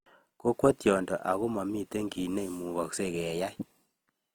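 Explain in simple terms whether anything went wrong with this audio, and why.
Opus compression affects the whole clip, from start to finish. The speech sounds rough and grainy rather than swirly, likely because the encoder, short of data, keeps each frequency band's overall loudness but fills in its finer detail with copied or noise-like sound.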